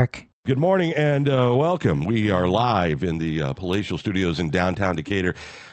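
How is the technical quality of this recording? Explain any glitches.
The speech in this recording is held back by a steady timing problem rather than any single loud glitch. The sound never drops out, but its pace is subtly unsteady. It carries the band limit of a call codec, with nothing above about 8 kHz, which fits Opus at a moderate bitrate.

Clock drift between sender and receiver runs the whole length of the clip. The sending device's audio clock runs roughly 4 percent faster than the receiver's, so more audio arrives than the receiver plays out. Its jitter buffer keeps creeping toward overflow. What tells this apart from ordinary network jitter or packet loss is the direction. The error always pushes the same way and never produces gaps or silences, only a persistent surplus the receiver has to get rid of.

Repeated timing corrections are how that surplus is shed, from 0.02 s to 5.66 s, with the stream effectively running at 104 percent speed. 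The receiver trims short slices of audio at uneven intervals to keep its buffer from overfilling. Each cut is small, so you hear slight hiccups and a faintly hurried, uneven rhythm rather than clicks or dropouts. Unlike packet-loss concealment, nothing is smeared or filled in. Material is quietly removed, always in the same direction.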